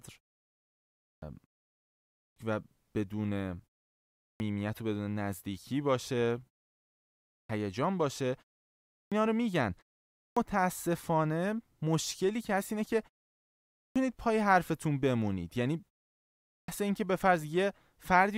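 Speech with clipped starts after pauses at 0.91, 2.05, 4.09, 7.18, 8.81, 10.07, 13.64 and 16.39 s. Each time, roughly 0.3 s of onset is swallowed while the output device wakes from a 0.33–0.79 s pause, so the waveform jumps from flat silence straight into full-amplitude speech, and the spectrogram shows hard vertical edges without soft leading consonants.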